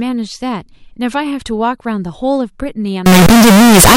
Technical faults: float read as integer

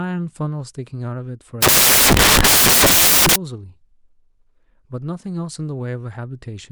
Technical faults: samples built from the wrong bytes

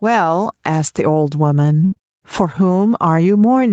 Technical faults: gain pumping; burst of packet loss; short concealed packet loss

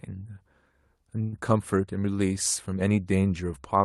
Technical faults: call audio freeze

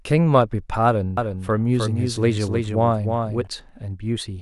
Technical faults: doubled audio track

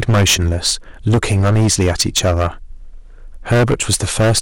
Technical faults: hard clipping

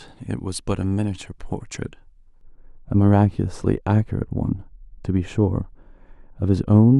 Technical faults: de-emphasis applied wrongly

